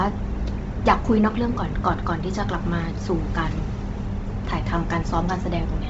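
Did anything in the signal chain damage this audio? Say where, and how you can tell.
Yes, codec stage: throughout, the speech sounds grainy and breathy and stops above 7.8 kHz, likely Bluetooth LC3 compression. A spectrogram shows a flat ceiling over noise-filled highs.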